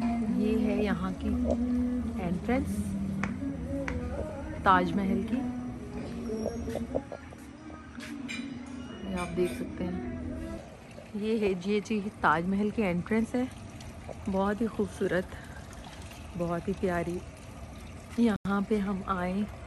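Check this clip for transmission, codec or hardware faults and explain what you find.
One fault turns up, a Bluetooth stall near the end. From 18.36 to 18.45 s the sound drops to silence for about 90 ms, a flat gap across every frequency, likely because the headphone buffer ran dry.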